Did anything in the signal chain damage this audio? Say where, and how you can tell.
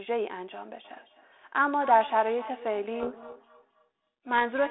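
Yes. The feedback echo between two devices starts at the call stage at 0.84 s and runs to the end. Each phrase returns roughly every third of a second, peaking at about -17 dB below the direct sound, thinner and more ringing with each pass. A second device in the room is replaying this line, and this device's microphone picks that up again, which the echo canceller here cannot remove. On a spectrogram, each syllable has fainter, evenly spaced ghost copies trailing behind it. The waveform shows a low smear filling the gaps.

In the codec stage, a codec payload misread runs from 3.0 s to 4.3 s, burying the sound in harsh, rasping distortion that then clears abruptly. The G.726 code words are being unpacked with their bit order reversed, so the decoder builds its adaptive prediction from scrambled differences. On a spectrogram, broadband grit fills the 300 Hz to 3.6 kHz telephone band, which fits G.726 at 32 kbit/s, for exactly that span. 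The waveform turns jagged and noisy there.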